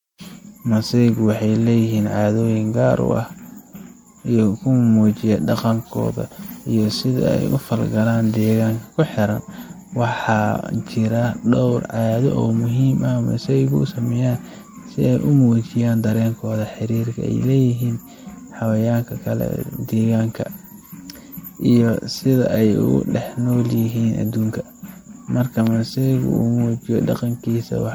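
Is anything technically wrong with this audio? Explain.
Yes, there are two faults.

Throughout the speech there is generation loss, likely from repeated MP3 re-encoding, around seven passes at what sounds like roughly 96 kbit/s. Each pass requantises on a shifted frame grid, so the voice sounds swirly, hollow and smeared, with blurred consonant onsets. A spectrogram shows patchy, flickering holes and smeared transients, with nothing above 20.1 kHz.

From 25.67 to 25.69 s there is a single loud pop, likely an electrical pulse from a plug, switch or static discharge. It is heard as a sharp click over the continuing speech, peaking about 10 dB above the signal. The waveform shows a narrow spike, and the spectrogram a thin vertical broadband line.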